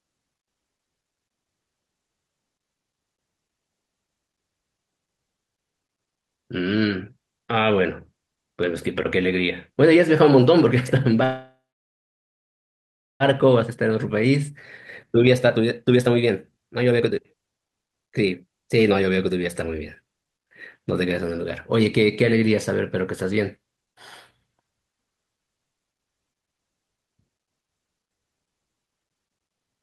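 A speech recording carried over a call path whose band stops near 12 kHz, consistent with Opus at around 40 kbps, has two related faults. From 11.23 to 13.23 s there is a call audio freeze. The last sound is stretched into a brief decaying tail, followed by about 1.64 s of silence, roughly 1.97 s of inserted time in all. Nothing is lost. The speech resumes exactly where it stopped, now running almost 2 s late. The likely cause is packets held up in transit until the jitter buffer ran dry. From 13.33 to 20.39 s comes a jitter buffer speed-up. The speech plays at about 127% of normal rate while its pitch stays unchanged, so it sounds rushed. Once the late packets arrive in a burst, the buffer holds too much audio, and the receiver repeatedly cuts out short pitch-period-length segments. Over those seven seconds it trims away about two seconds, recovering the delay the freeze introduced.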